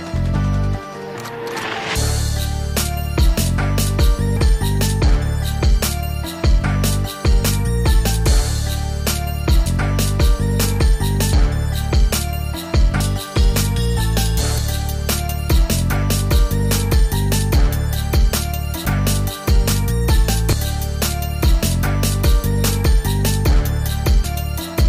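The audio skips abruptly eight times, at 4.37, 9.66, 11.33, 13.00, 14.58, 18.86, 20.53 and 24.24 s, each time with a jump forward and no gap of silence. The likely cause is a dropped buffer (overrun), in which the recorder fails to collect samples before the hardware overwrites them. About a tenth to three tenths of a second vanishes each time. A waveform shows hard discontinuities, and a spectrogram shows thin vertical broadband lines where the sound changes abruptly.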